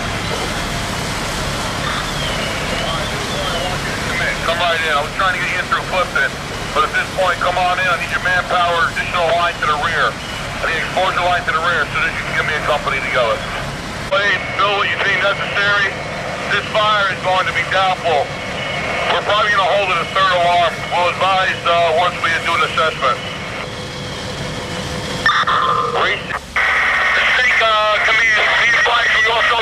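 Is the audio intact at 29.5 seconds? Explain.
Yes, the audio is intact at 29.5 seconds, with no dropout, glitch or other fault audible at that moment.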